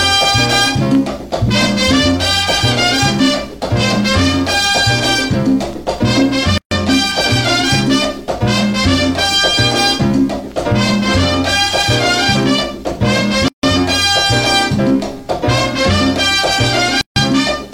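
Three short dropouts break otherwise continuous audio: a gap at a join of encoded pieces at 6.58 s (about 135 ms), 13.48 s (about 150 ms) and 17.01 s (about 150 ms). Each piece was encoded separately and spliced without trimming, so encoder start delay and final-frame padding remain as silence. On a waveform these appear as flat, near-empty stretches with smeared edges, and on a spectrogram as vertical blank bands before the sound resumes where it stopped.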